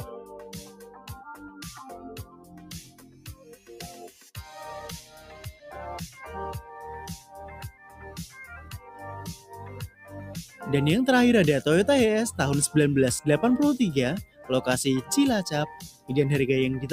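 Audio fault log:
throughout: noise suppressor applied to music or sounds. A speech-tuned suppressor treats steady tones and ambience as noise, so level swings by about 10 dB. Attacks pass intact while sustains thin, which separates it from compressor pumping, where loud onsets trigger the ducking.
0.64–1.62 s, 1.94–4.3 s, 5.04–5.62 s, 7.72–8.01 s, 9.89–10.12 s, 14.26–14.48 s, 15.92–16.1 s: sound cut by the noise suppressor. Held or decaying sound sinks by about 6 to 13 dB, deepest near 16 s, and tails end early. Unlike a dropout, the sound fades down rather than vanishing.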